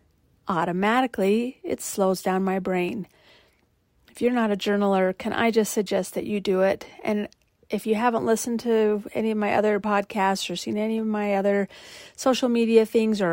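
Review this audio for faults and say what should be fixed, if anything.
Three short skips from overlap between stream segments occur at 2.89 s (after "down my"), 5.87 s (after "journaler can I just", before "that you do it") and 9.84 s (after "any of my other"). At each point, overlapping timestamps at a 1-second segment boundary caused the player to discard about 5 to 9 ms of audio that was never actually duplicated. The waveform jumps across the gap. To prevent this, the packager should produce contiguous, non-overlapping segment timestamps so the player never trims real audio at the joins.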